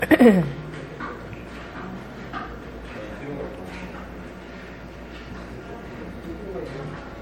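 From start to finish the sound has generation loss. It swirls and smears, and it sounds hollow. Attacks are blurred rather than crisp. Nothing is present above 16.6 kHz. The damage is heavier than one low-rate pass would leave. It fits MP3 at around 60 kbit/s, likely applied about three times over. Each decode and re-encode quantised the sound again on a shifted frame grid. The noise and spectral gaps stacked up with every pass.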